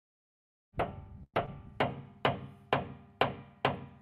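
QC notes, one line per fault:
1.23–1.36 s, call audio freeze: The stalled sound points to packets likely held up in transit, draining the jitter buffer. The receiver stretched the last sound into a fading buzz or hiss for about 0.1 s, including 50 ms of silence, then resumed where it stopped, inserting a gap and running about 0.1 s later.
1.46–1.49 s, short concealed packet loss: About 20 ms of audio failed to reach the decoder in time, and the receiver extrapolated roughly 13 ms from the preceding sound before blending back. The result is a brief smear or wobble where the missing audio should be.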